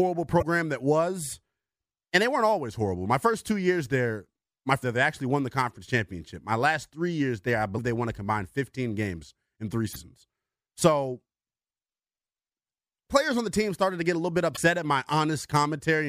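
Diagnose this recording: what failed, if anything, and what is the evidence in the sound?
Damaged data in the compressed speech stream. Brief glitches occur at 0.38–0.43, 4.80–4.84, 7.77, 9.92–9.96 and 14.54–14.58 s. The decoder misreads corrupted frames and resyncs.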